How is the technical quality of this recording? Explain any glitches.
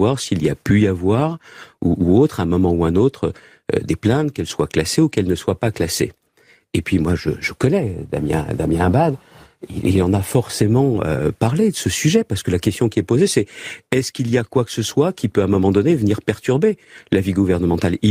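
No glitches can be heard in this speech recording, and the signal holds steady throughout without any dropouts, distortion or timing breaks.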